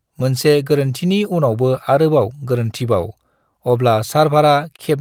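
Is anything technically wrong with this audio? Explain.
Yes. The speech carries a clock drift between sender and receiver that runs the whole clip. The sending side's clock runs roughly 3% slow compared with the receiver's, so audio arrives a little more slowly than it is played out. The jitter buffer keeps draining, and the receiver has to make up the shortfall by repeating fragments of sound. Unlike one-off network jitter, the drift pushes steadily in one direction, so its effects recur through the clip instead of clustering at a single moment.

The repeated timing corrections run from about 0.23 s to 4.47 s. To keep pace with the slow sender, the receiver repeatedly duplicates short slices of the signal, adding roughly a tenth of a second in total. The effective playback speed is 98%. These edits are small and unevenly spaced, heard, if at all, as faint hiccups and a slightly dragging, unsteady tempo. 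That sets them apart from a time-stretch applied evenly, which would slow everything smoothly without audible seams.

A short stall from a late packet occurs at 4.76 to 4.81 s. A packet was not there on time, the jitter buffer ran empty, and the receiver held the last sound for 22 ms until data arrived, then resumed exactly where it left off. Nothing is lost. The result is a briefly frozen sustain with a slight buzz or dip. That distinguishes it from packet loss concealment covering a missing packet, where content would actually be absent.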